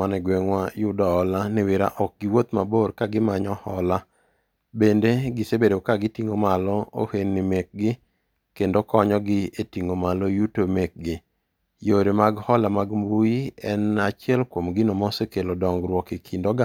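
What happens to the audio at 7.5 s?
Nothing goes wrong at 7.5 s; the speech continues intact through that moment.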